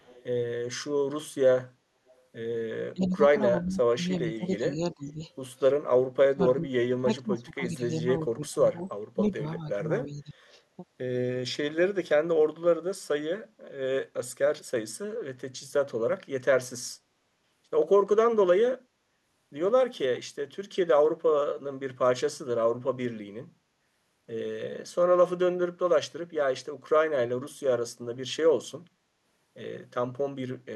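Speech with two kinds of fault. Faint delayed repeats of the audio at 0.0–0.24 s, 2.07–2.11 s and 10.52–10.58 s trail the original by 358 ms, sitting roughly 30 to 40 dB below it. This is an echo leak, likely from a far-end loudspeaker whose echo canceller let some pickup return. Unlike level dips, it adds a second copy. The talker's own level drops at 2.94–3.2 s, 3.61–5.21 s, 6.13–8.8 s, 9.14–10.35 s and 10.77–10.85 s, by as much as 30 dB at 6.13–8.8 s and only slightly at 10.77–10.85 s. This is speech suppressed in double talk: the canceller, likely confused by simultaneous talk, pulled the near voice down, removing sound rather than adding any.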